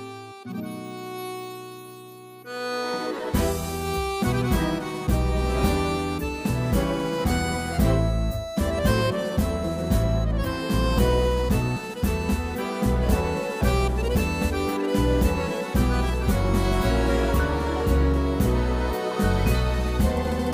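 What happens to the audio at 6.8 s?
Nothing goes wrong at 6.8 s: the audio plays through that moment intact, with no dropout, click or other fault.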